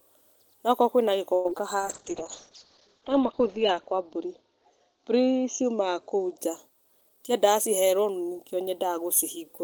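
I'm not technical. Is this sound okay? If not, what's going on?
No. From 1.34 to 1.60 s the speech turns choppy and robotic, with bits missing. This is repeated packet loss: four chunks of audio failed to arrive in quick succession, and the gaps were patched by stretching the last sound, the longest patch about a tenth of a second.

From 1.80 to 6.44 s the voice becomes duller, rougher and watery. That is a call bitrate drop: the connection seemed to weaken, so the sender squeezed the audio into far less data, losing detail and the crisp sounds above 8 kHz.

From 6.77 to 8.07 s the speech sounds hurried but not higher-pitched, about 9 percent faster. This is a jitter buffer speed-up: the receiver had built up extra delay and caught up by trimming many tiny slices, roughly 150 ms in total.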